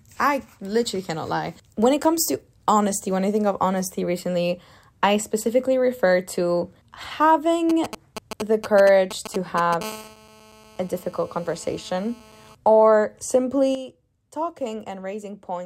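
From 7.70 to 9.83 s a galloping dit-dit-dit of short 217 Hz buzzes cuts in, fairly loud at roughly 10 dB below the speech. These are GSM signalling bursts: a nearby 2G phone is signalling, and the audio circuit rectifies its radio pulses. At 9.84 s this turns into a steady, hard, raspy 217 Hz buzz full of harmonics, about 22 dB below the speech, lasting until 12.55 s. This is GSM phone buzz from a phone now in a call, transmitting continuously at 217 bursts per second. At 13.75 s the speech and background noise drop together by about 8 dB and stay lower to the end. This sudden gain jump is likely a digital gain change applied from one sample to the next without a ramp.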